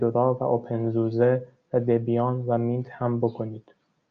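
No technical faults can be heard anywhere in the speech. Nothing in the recording needs a timestamp or a note.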